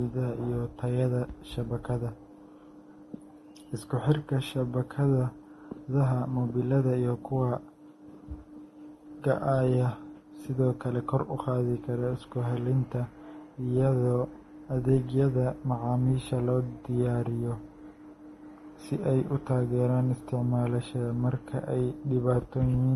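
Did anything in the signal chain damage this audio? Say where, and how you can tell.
Yes, at the codec stage: the speech carries layered codec artefacts throughout, with a hard spectrogram ceiling at 12.1 kHz, likely from transcoding between lossy codecs, Vorbis into Opus.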